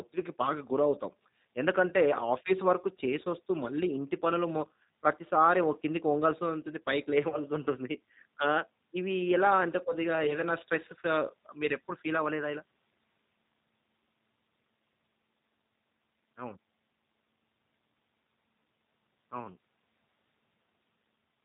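Throughout, the speech passes through a G.729 codec, which fits 8 kbit/s: nothing above 4 kHz survives, and the model-based rebuild leaves it plainly rough and synthetic. At 7.30 to 7.36 s and again at 10.27 to 10.35 s, VoIP packet loss is concealed by the speech codec. Each gap, about 20 ms of missing audio that points to a single lost packet, is bridged by extrapolation, so the speech briefly smears into a fading buzzy tone or coloured noise and then returns weakened.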